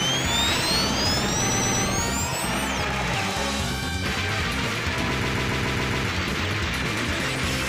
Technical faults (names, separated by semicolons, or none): repeated frames